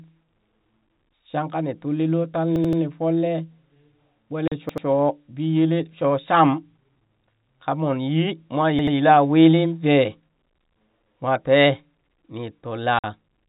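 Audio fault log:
2.56–2.82 s, 4.69–4.86 s and 8.79–8.96 s: repeated buffer. Each time, a piece of about 85 ms plays back to back several times with a hard splice at each join: three extra plays at 2.56 s just before "nii folle", and two extra plays at 4.69 s before "biyelee shoo sham" and at 8.79 s before "wili vee". Fresh audio arrived late, so the output device played its last block again. The block length fits a 4096-sample buffer, and at that size each repeat is heard as a stutter.
4.48–4.52 s and 12.99–13.04 s: packet loss filled with silence. The signal drops to digital silence for 40 ms and then 50 ms, with abrupt edges at the entry and exit of each gap. Consecutive packets went missing, and the receiver inserted nothing in their place. The gap lengths fit runs of four and five lost 10 ms packets. Both holes sit inside the telephone-band audio, which has no content above 4 kHz.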